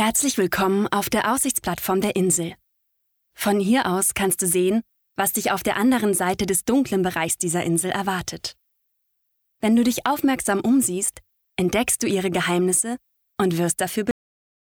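At 14.11 s the audio has a cut-off end. The last buffers were never written, so the sound stops mid-stream and drops straight to digital silence for the final half second. Unlike a dropout, nothing resumes, and unlike a fade, there is no decay.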